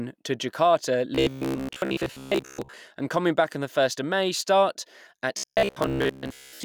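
From 1.15 to 2.77 s and from 5.37 s to the end, speech becomes a rigid 66.7 Hz metallic buzz, robotic sound likely from repeated 15 ms buffers, continuous rather than gapped.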